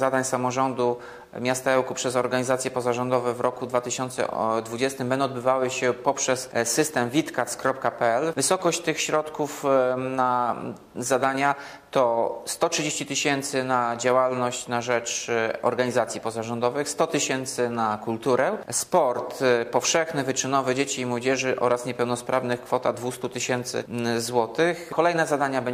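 No technical faults can be heard anywhere in the clip. There is nothing to time or trace back to a cause.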